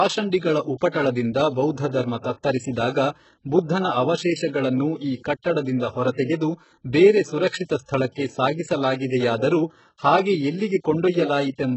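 Speech throughout carries heavy HE-AAC compression damage, likely from a very low bitrate around 8 kbps: the upper range is rebuilt rather than real, so s sounds come out gritty and metallic, and a spectrogram shows a hard ceiling at 8 kHz with smeared, copied-looking bands below it. At 6.24 to 6.28 s, pre-echo puts about 39 ms of hiss before a sharp attack, visible on a waveform as a band of noise leading into the transient, which itself sounds softened.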